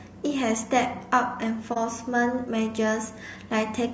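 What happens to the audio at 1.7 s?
At 1.73 s the speech drops out in an AAC frame loss with muting, leaving a gap that runs to about 1.78 s. The decoder had nothing for that stretch and zeroed its spectrum. The overlapping transform windows then faded the level down into the hole and back up out of it. The result is a brief dip in the sound. Its roughly 30 ms core fits a single lost frame.

The same moment also carries the grain heard throughout the clip. The audio is rough, with noise filling the gaps between pitch harmonics and a thin, somewhat synthetic top band. That pattern points to low-delay AAC compression, likely AAC-ELD at around 32 kbps. Its short analysis frames separate harmonics poorly, and at that bitrate too few bits remain to code the fine spectral detail cleanly, so the damage is plainly audible.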